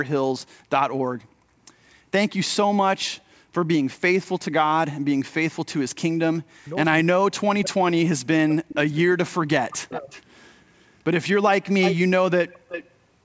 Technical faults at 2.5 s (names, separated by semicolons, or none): none